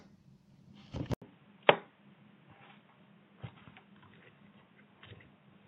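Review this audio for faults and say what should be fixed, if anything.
From 1.14 s, after an 80 ms gap, nothing above 3.8 kHz and a faint new noise floor: likely an input switched to a poorer device, not simple filtering. Lock the recording input so the system can't change microphones mid-recording.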